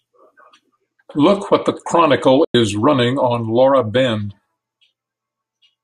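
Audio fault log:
2.44–2.55 s, digital broadcast dropout: the speech snaps to silence with a fade of only about 3 ms, leaving a hole of roughly 0.1 s before the sound resumes on "running on". The receiver stopped getting usable data, either through signal loss or frames that failed their checksum, and muted until clean frames arrived. The gap of about 96 ms fits roughly three lost frames, and whatever was broadcast in that stretch is gone.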